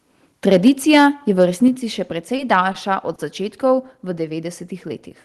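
A short speech recording with a rough start. From 0.47 to 1.07 s the loudest syllables have a harsh, crackly edge, with peaks pushed about 5 dB past the converter's limit and a few percent of samples flattened, which is most likely microphone overload from an input gain set too hot. The level then drops abruptly twice, by about 2 dB at 0.68 s and about 4 dB at 1.68 s. That's likely the call software spotting the clipping and stepping the microphone volume down in one go each time. Later, there are three short stalls from a late packet: at 2.36 s and 2.72 s the sound gets held for an extra 20 ms, and at 3.15 s for 30 ms. Each gives a brief smeared hang with a slight buzz or dip where the jitter buffer ran dry and the last bit of audio was stretched until the packet showed up. Nothing is lost, it just picks up where it left off. The Opus call path itself tops out around 12 kHz.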